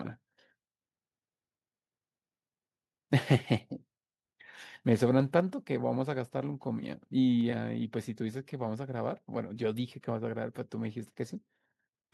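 Microphone overload, likely from input gain set too high, drives peaks past the converter's ceiling from 3.31 to 3.36 s (about 3 dB over, roughly 3 percent of samples flattened) and again from 4.92 to 4.94 s (about 1 dB over). The squared-off tops give those loudest moments a harsh, crackling edge.

At 5.40 s the microphone volume is stepped down, likely because the call software reacted to those clipped peaks and cut the device's input gain by about 3 dB in one move. Speech and background drop together to a quieter level at that instant.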